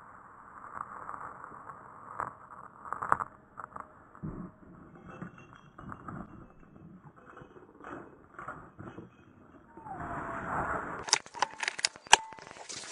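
From 10.99 to 12.85 s a train of clicks, about twenty, ticks over the sound at an uneven pace near 9.8 per second, peaking about 10 dB above it, likely interference or a faulty connection or power supply. The waveform shows sharp matching spikes, and the spectrogram thin full-height vertical lines.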